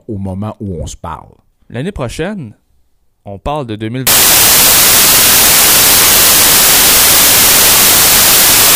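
From 4.07 s to the end, the speech turns into loud, harsh broadband noise: samples built from the wrong bytes, with each value's low, fast-changing bits misread as its large part. Unlike steady added hiss, this noise is built from the speech samples themselves.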